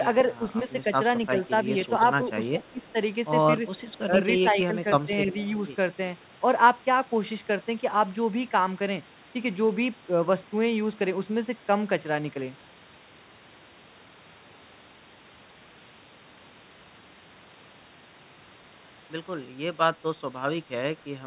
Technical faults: speech suppressed in double talk; echo leak

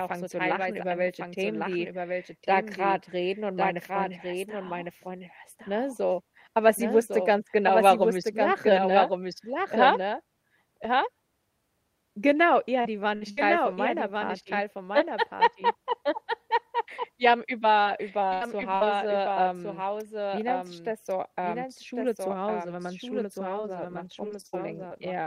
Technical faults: doubled audio track; repeated packet loss (robotic sound)

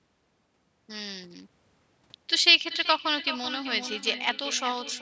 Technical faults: feedback echo between two devices

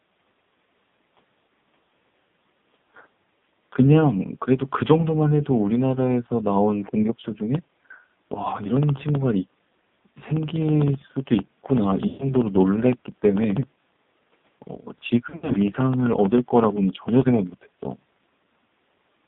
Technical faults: AMR narrowband mobile codec; periodic USB or driver dropouts; lost AMR speech frames

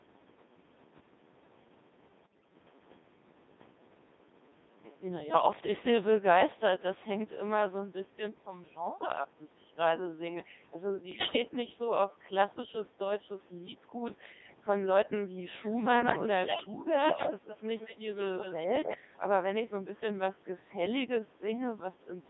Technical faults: Codec 2 vocoder; bit errors on digital voice radio; echo leak

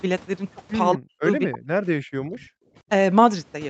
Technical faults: speech suppressed in double talk; background gated by the echo canceller

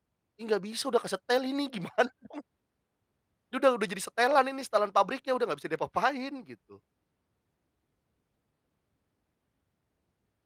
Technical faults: none

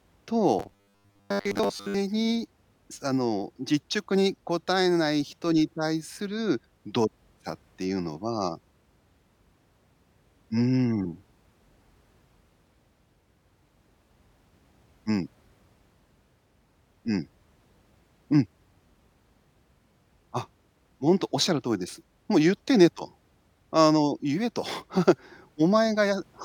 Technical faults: robotic sound from repeated short buffers

